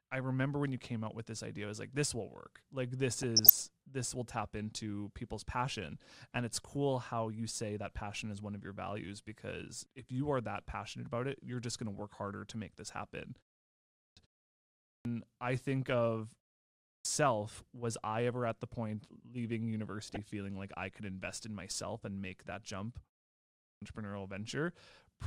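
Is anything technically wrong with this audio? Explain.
Yes, two faults are audible in this speech.

DAB burbling occurs from 3.23 to 3.60 s, and again from 19.99 to 20.31 s, between "at the point leaving" and "like I could invest". Both stretches break up into short noise blips over the speech. This is weak digital radio reception. Bit errors, at a rate of roughly a few tenths of a percent, slip past error correction into the MP2 stream. Corrupted samples put short blips of noise into single sub-bands, and corrupted scale factors make sub-bands leap in level for up to a frame, over what sounds like fifteen or so frames each.

Clipped start after a pause hits four times. Speech resumes abruptly out of silence with its opening sounds missing. At 13.79 s, after "to make this happen", about 0.38 s is lost. At 14.70 s about 0.35 s is lost, at 16.65 s, after "I think of", about 0.40 s, and at 23.42 s about 0.40 s. 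Each follows a pause of roughly a third to half a second. The output device sleeps during the silence and needs time to wake or relock, so it swallows the start of the next phrase.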